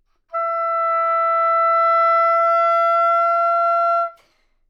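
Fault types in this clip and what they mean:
No faults can be heard in this everyday sound.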